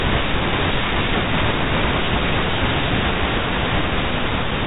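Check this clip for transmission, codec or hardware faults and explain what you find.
No transmission, codec or hardware faults are evident.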